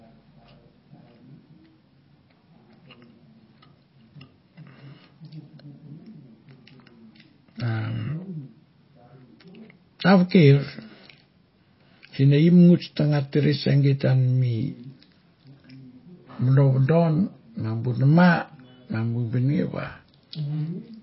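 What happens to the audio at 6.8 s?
At 6.8 s, as throughout the clip, the speech has nothing above 5.5 kHz and a plainly audible watery swirl, likely MP3 compression starved of bits, which fits about 24 kbps. A simple low-pass filter would dull the sound without that flickering, metallic texture.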